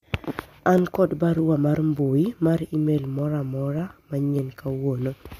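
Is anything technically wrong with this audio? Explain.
Yes. There are clock drift buffer slips from 0.18 s to 4.99 s. A click or pop lands at a steady 0.6 s interval, about ten times across that span, whenever there is speech. The likely cause is two devices running on separate clocks that disagree by several hundred parts per million. The buffer between them slowly fills or drains. A short block of roughly fifteen samples is then dropped or repeated, breaking the waveform.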